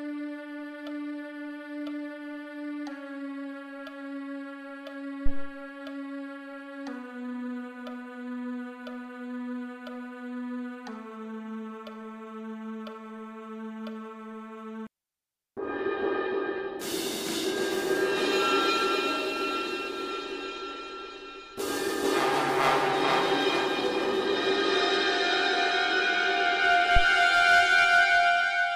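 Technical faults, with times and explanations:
5.26–5.55 s and 26.96–27.07 s, phantom power thump: a supply switched on or off on a live input puts a sudden DC step through the coupling capacitors, heard as a deep thud peaking at about −12 and −11 dBFS and dying away over 66 ms and 24 ms. The waveform shows a large one-sided swing easing back to centre. The spectrogram shows a dark low-frequency smear at the onset, fading quickly with little energy above the bass.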